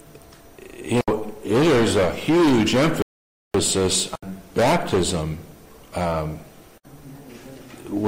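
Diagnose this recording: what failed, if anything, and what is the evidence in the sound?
The wireless Bluetooth link likely stalled, with delayed packets leaving the headphones' buffer empty until retransmissions arrived. The sound drops to complete silence from 3.02 to 3.54 s, a gap of about 0.52 s, then resumes, a clean dropout typical of a Bluetooth stall.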